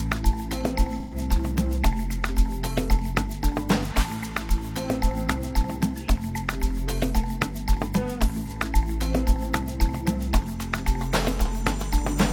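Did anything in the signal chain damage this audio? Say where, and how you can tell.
Yes. The damage sits at the codec stage, as AAC frame loss with concealment. From 1.00 to 1.15 s, and again briefly around 8.46 to 8.52 s, the sound turns smeared and noisy instead of dropping out. The decoder is rebuilding missing frames from the last good spectrum, and the first gap's length suggests three lost frames of about 43 ms each. A plain zero-filled dropout would leave a clean silence edged with clicks, not this phasey wash.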